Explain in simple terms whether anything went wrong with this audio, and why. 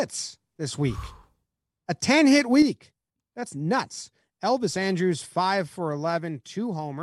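At about 2.62 seconds the speech suddenly gets quieter and stays that way to the end, likely because one channel drops out of the stereo pair.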